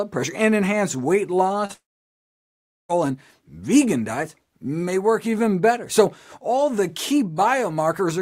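At 1.65 s to 1.71 s there is a short concealed packet loss: about 40 ms of audio arrived too late, and the receiver extrapolated the preceding sound before blending back. It is heard as a brief smear.

From 1.73 s to 2.91 s the sound stops. A fading continuation of the last sound is followed by roughly a second of silence, seen as a flat waveform and an empty spectrogram, before the audio resumes with that stretch missing, most likely a long network dropout.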